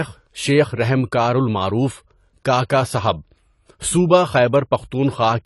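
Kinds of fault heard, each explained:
AAC compression: The speech was likely passed through a low-rate AAC-LC encoder, with a sound that fits around 32 kbps. To save bits it drops everything above 11.5 kHz and coarsely quantises the rest, leaving the audio dull and plainly smeared, with fizzy, warbling sibilants.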